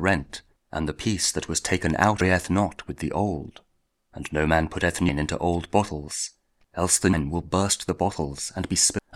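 Brief glitches at 2.21, 5.09 and 7.13 s, then a longer one from 8.99 to 9.08 s: damaged data in a compressed stream, where the decoder misreads corrupted frames and resyncs.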